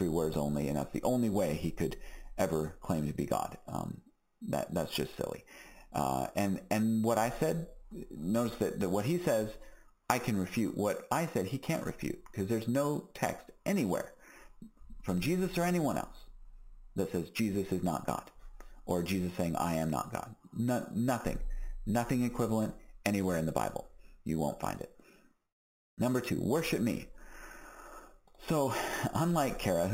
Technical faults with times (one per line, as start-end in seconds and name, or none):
0.00-29.94 imaging from sample-and-hold upsampling